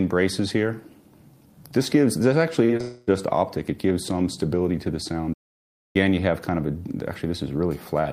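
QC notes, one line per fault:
2.65–2.71 s and 2.77–2.81 s, short concealed packet loss. About 40 ms and then 20 ms of audio failed to arrive in time. The receiver extended the preceding sound over each hole for about 35 ms and 26 ms, then blended back. Each is a brief smear or wobble.
2.81–3.09 s, long network dropout. Directly after the second gap, about 0.26 s of audio is gone. The sound carries on as a continued buzz or hiss for roughly 258 ms, with no silence, then resumes further on without the lost part. A network dropout is the likely cause.
5.33–5.96 s, playback stall. The sound stops in mid-flow and the output goes silent for about 0.61 s before it picks up again. This likely comes from the player running out of data, or its thread being blocked, until it recovered.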